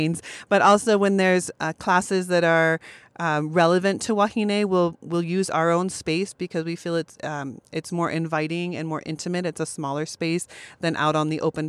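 No technical faults are audible.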